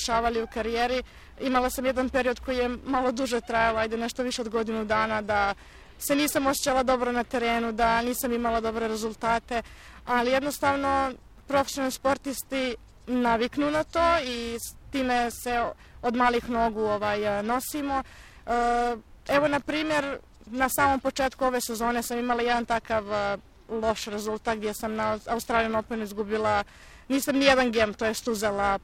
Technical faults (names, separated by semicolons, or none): periodic clock jitter